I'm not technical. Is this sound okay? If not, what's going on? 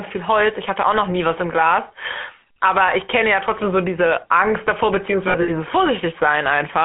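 No, this speech has two problems.

The GSM full-rate codec, the compression used by early mobile phones, is at work for the whole clip, from start to finish. It rebuilds the voice from a simple model of the throat and mouth driven by a sparse train of pulses, so the voice sounds buzzy and gravelly. The phone line also keeps only sounds between about 200 Hz and 3.4 kHz, which makes it thin and muffled.

Lost GSM frames cause a glitch from about 5.28 to 5.50 s. Small pieces of the signal went missing, adding up to about 120 ms scattered across 200 ms, with the longest gap under a tenth of a second. The phone filled each gap by repeating the last good piece. That is why the voice briefly turns into a rough, metallic ring there.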